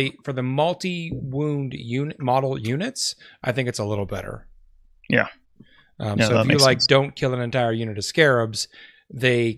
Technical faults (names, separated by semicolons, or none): none